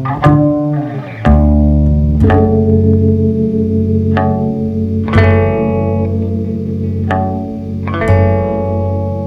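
From 2.22 to 3.09 s the music runs into hard clipping. The signal is pushed about 3 dB beyond what one stage can pass, so the loudest peaks are sliced flat rather than rounded. Those squared-off tops throw energy into high harmonics, heard as a brittle crackle riding on the peaks. Unlike soft saturation or a limiter, which thicken or duck the sound smoothly, this distortion appears abruptly and only where peaks overrun.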